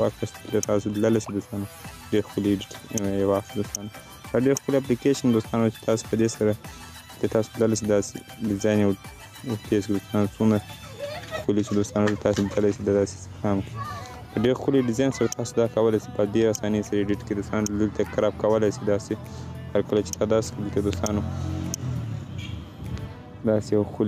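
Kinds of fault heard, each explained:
gain pumping: throughout, the gain is pulled down by about 5 dB under loud sounds, likely a fast limiter on excess gain; unlike gating, it turns the level down rather than cutting it off.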